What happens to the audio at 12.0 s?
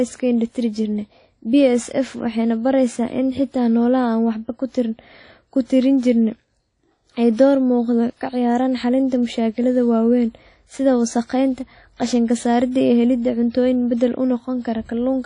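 Right around there you get pre-echo. From 11.96 to 12.00 s there's a short hiss smeared ahead of a sharp attack, about 37 ms of it, so the onset comes across soft and blurred rather than crisp. That's the transform codec at work. It spreads its quantisation noise across the whole block, and with the attack landing late in that block, the noise meant to hide under the loud part ends up sitting exposed in the quiet moment just before it.

The backdrop to all this is plainly audible codec damage running through the whole speech clip, likely from WMA compression. The ringing, washy texture and the hiss that swells and shrinks with the signal fit a low bitrate, something around 32 kbps. There's also nothing above about 10.1 kHz, because the encoder has thrown away the weak high-frequency content. Those long transform blocks are exactly what lets the noise leak ahead of that attack at 12 s.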